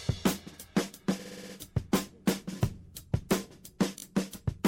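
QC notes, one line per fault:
1.19–1.55 s: repeated frames. A short block of compressed frames plays again and again, consistent with a 60 ms block sounding six extra times. The result is a rapid stutter. This adds 360 ms.
3.98–4.02 s: repeated frames. The same fault on a smaller scale. A 20 ms block plays twice more, giving a brief stutter. This adds 40 ms.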